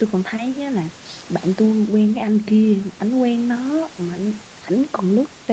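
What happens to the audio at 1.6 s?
Nothing goes wrong at 1.6 s: the speech passes through intact, with only the usual faint room noise, about 20 dB below the speech, and the band-limited sound of the call path, which has nothing above 8 kHz.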